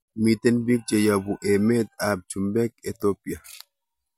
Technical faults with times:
none

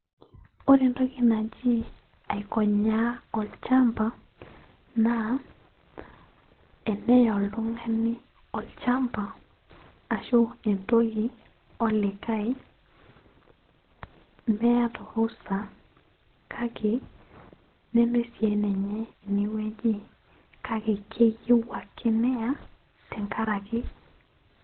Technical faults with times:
0.00-24.64 Opus compression

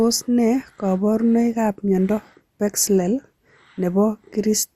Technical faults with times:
0.00-4.76 MP2 compression

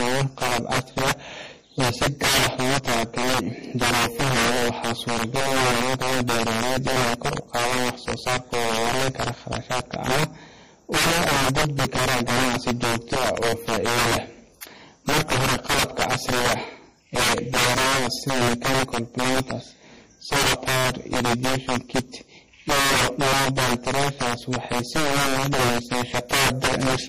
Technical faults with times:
0.00-27.08 integer overflow
0.00-27.08 low-bitrate audio saved at a high bitrate

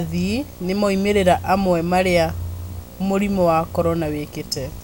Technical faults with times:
0.00-4.84 video or display buzz

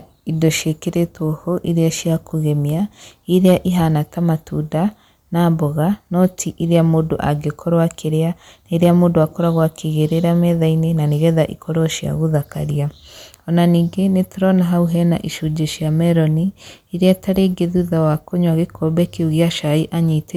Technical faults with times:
3.36-3.53 hard clipping
6.22-6.25 hard clipping
17.07-17.11 hard clipping

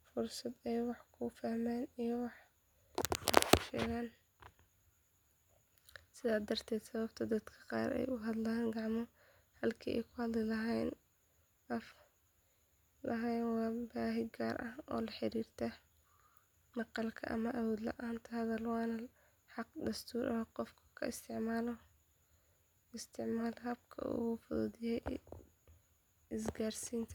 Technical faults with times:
none

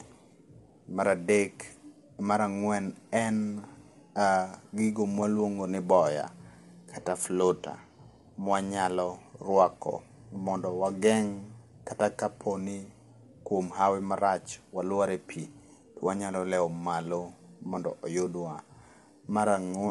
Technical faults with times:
0.00-19.91 low-delay AAC compression

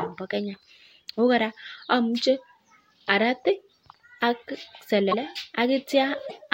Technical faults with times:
5.11-5.14 broken MP3 bit reservoir
6.28-6.32 broken MP3 bit reservoir

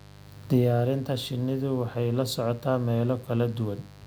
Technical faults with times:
0.00-4.07 mains buzz

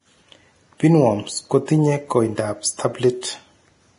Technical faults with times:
0.00-3.99 Vorbis compression

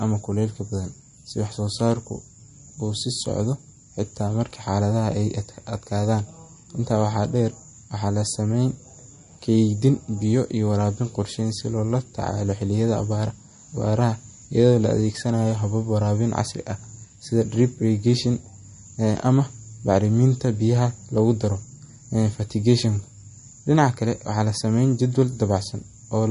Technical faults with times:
0.00-26.30 MP3 compression

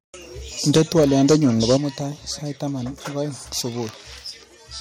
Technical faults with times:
0.68-1.76 microphone overload
0.78 microphone volume stepped down
1.77 microphone volume stepped down

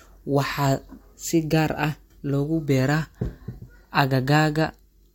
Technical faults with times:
none

